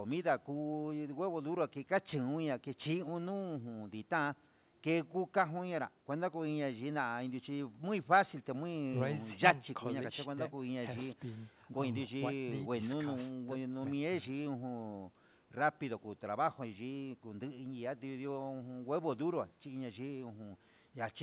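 There are no technical faults in this speech to describe, and the G.711 mu-law call path leaves it band-limited to nothing above 4 kHz.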